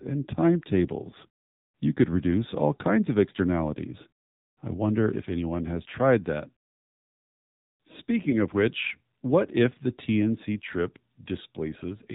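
A speech recording squeezed through the AMR narrowband mobile codec, at a low rate that sounds consistent with the 7.4 kbps mode. The encoder samples at 8 kHz and models the throat as a filter driven by a sparse set of pulses, so nothing survives above 4 kHz and the voice takes on a plainly audible buzzy, synthetic edge, with the brightness of consonants gone. There are also two lost AMR speech frames, each a single 20 ms frame that failed its checksum. For each one, the decoder filled in by repeating the last good pitch and vocal-tract settings at reduced gain. The first falls at 1.10 to 1.15 s. The second falls at 8.30 to 8.36 s, just before "of which what if". Each is heard as a brief dip or warble in the voice, with the voice coming back weak or rough for a moment.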